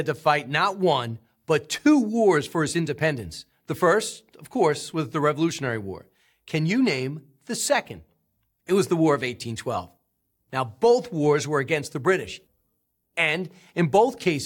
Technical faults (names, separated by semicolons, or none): none